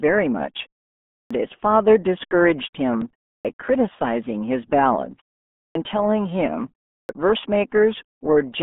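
The whole speech clip carries the RealAudio 14.4 codec sound. Nothing gets through above about 3.8 kHz, and the usable band sits roughly between 200 Hz and 3.5 kHz. The heavy coding damage makes everything muffled and gargly, which fits an 8 kbit/s dial-up-era speech codec throwing away most of the detail to squeeze the signal that far.

On top of that there's a clipped start after a pause, four times: at 1.24 s, 3.38 s, 5.69 s and 7.02 s. Each time the sound resumes out of silence, between about 0.3 and 0.6 s long, and the first 62 to 70 ms are simply missing, so the onset jumps in abruptly without its opening sounds. That's the output device dozing off in the gap and not waking fast enough.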